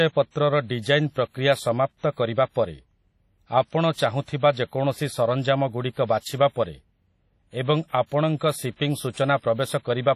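WMA compression, heard throughout the speech, is the likely cause of its ringing, washy smear and a hiss that rises and falls with the signal. Nothing remains above 15.7 kHz. The heavy damage fits a low bitrate near 32 kbps, where long transform blocks spread quantisation noise over tens of milliseconds and weak spectral lines are zeroed.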